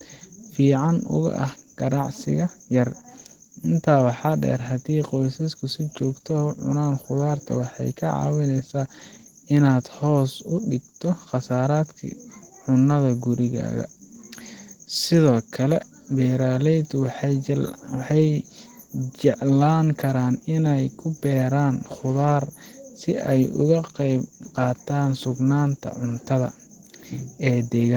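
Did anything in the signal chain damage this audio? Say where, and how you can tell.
Yes. Opus voice compression throughout, at the codec: hoarse, slightly robotic speech despite content near 20.1 kHz fits hybrid coding at roughly 16 kbps.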